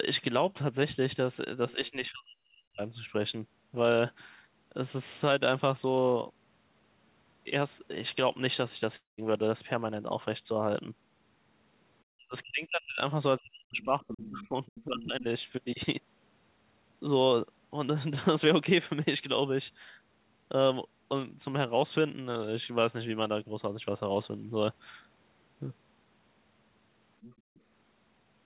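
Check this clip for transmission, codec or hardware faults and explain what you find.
Yes, there are four kinds of fault here, all of them the sort a speakerphone call over a narrowband link produces. The audio is band-limited to 4 kHz throughout, which fits a 64 kbps G.711 mu-law call path and isn't a fault in itself.

Speech suppressed in double talk shows up three times: 1.73 to 2.80 s, 12.16 to 13.01 s, and 13.38 to 15.25 s. The talker's level collapses, bottoming out around 40 dB down. Roughly a second, then well under a second, then about a second and a half gets eaten. The likely cause is the echo canceller failing to tell the near talker from loudspeaker echo while both sides spoke, so it clamped down on everything.

The long network dropout runs from 8.96 to 9.20 s. About 220 ms of audio never arrived. The receiver papered over it for about 216 ms by stretching the last sound into a fading buzz or hiss, and about 150 ms of that stretch is plain silence. 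The sound then resumes further along with that chunk simply gone. That pattern is likely packet loss long enough to outrun the concealment.

The other side's voice leaking through appears as short scraps at 14.75 to 14.84 s and 15.00 to 15.04 s, about 20 dB under the talker. A longer bit follows at 27.22 to 27.61 s, about 25 dB under. These are fragments of a second voice. That's likely the far end's audio playing out of the talker's loudspeaker and not fully cancelled before the microphone signal was sent.

Background gated by the echo canceller hits from 27.41 to 27.56 s, right inside that last leak. The room sound drops by up to about 30 dB for roughly 150 ms, then comes back. That's the canceller slamming the mic down hard while the loudspeaker was active, then letting go.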